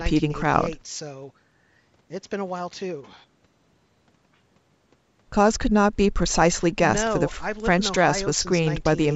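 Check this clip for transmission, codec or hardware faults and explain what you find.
No transmission, codec or hardware faults turn up in this speech clip, which has simply passed through a call's microphone processing with nothing above 8 kHz.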